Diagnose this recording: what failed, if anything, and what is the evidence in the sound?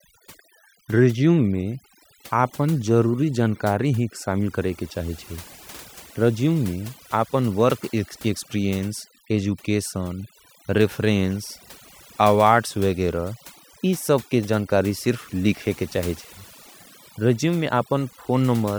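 A noise suppression stage in the call processing chain was set far too aggressively, producing overdone noise removal across the whole recording. Frequency bands that dip close to the suppressor's noise estimate are driven to near zero, so the background collapses into a hollow silence dotted with twinkling, chirpy specks. The same gating removes the softer parts of the speech spectrum.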